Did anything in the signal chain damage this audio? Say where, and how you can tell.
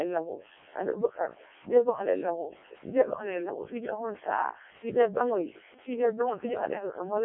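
Yes, the codec stage did it, and it's the whole clip. The speech has that robotic, buzzy Codec 2 vocoder quality from start to finish, sits in a narrow 300 Hz to 3.4 kHz line band, and there's nothing at all above 3.6 kHz. The damage is heavy, which fits the lowest-rate 700 bit/s mode. The decoder never had the waveform. It rebuilt the voice from sine waves using only pitch, voicing, energy and a rough spectral envelope.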